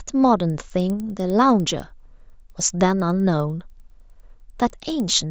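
Resampler restarted on every block, from 0.4 s onward: the speech ticks every 100 ms (10 Hz), as each block edge was converted without its neighbouring samples.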